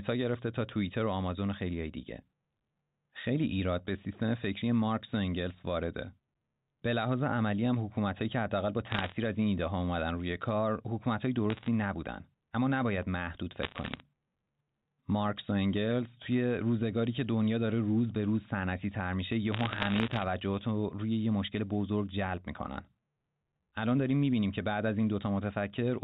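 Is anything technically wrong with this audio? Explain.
Yes, there are four short bursts of bit errors on a digital phone line, at 8.9–9.12 s, 11.5–11.68 s, 13.63–14.0 s and 19.52–20.24 s. Somewhere around one bit in a hundred gets flipped on this G.711 A-law line, and each flip corrupts a single sample. When it lands on a high bit, or on the sign of a loud sample, you get a sharp tick, so the speech picks up a crackle over those stretches. The longest burst is the one near 20 s.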